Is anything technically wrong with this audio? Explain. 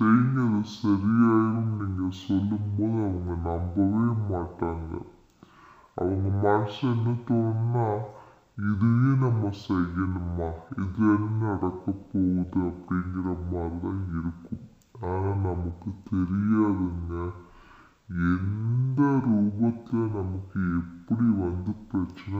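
Yes. Throughout, stereo read as mono: interleaved left and right samples are taken as one channel, so everything plays at half speed, an octave low, with a faint mirrored image up high.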